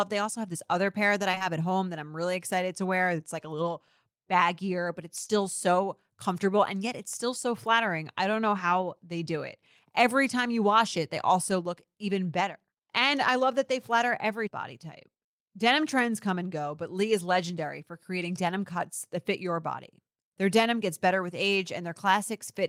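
At 1.31, 1.35 and 1.38 s, between "other pair that I" and "at home that I'm", three back-to-back stretches of short concealed packet loss occur, and two more follow at 5.24 and 5.28 s. Each gap lasts about 20 ms, which fits lost 20 ms packets. The decoder bridged each hole by extending the preceding sound, pitch-based or as shaped noise, then crossfaded back, leaving a brief smeared, wobbling patch around 1.31 to 1.42 s and 5.24 to 5.31 s.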